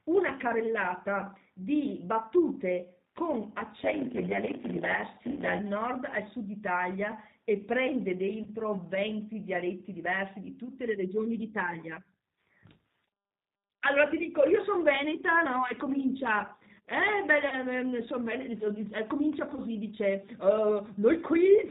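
Throughout, the G.729 codec at 8 kbit/s cuts everything above 4 kHz and rebuilds the speech from a model, so it sounds rough and synthetic rather than smeared like a transform codec.

At 5.31, 8.43, 17.49 and 19.54 s, VoIP packet loss concealed by the speech codec stretches the last sound into a fading buzz or coloured noise. The first lasts 60 ms, which fits two lost packets, and the others 30 ms each. The speech stays weak briefly afterwards, unlike the clean silence of a plain dropout.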